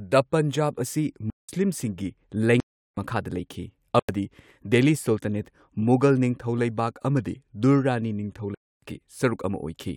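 Speech, with four blocks of digital silence, at 1.30–1.49, 2.60–2.97, 3.99–4.09 and 8.55–8.82 s, lasting about 90 to 370 ms. The lengths suggest unfilled output buffers.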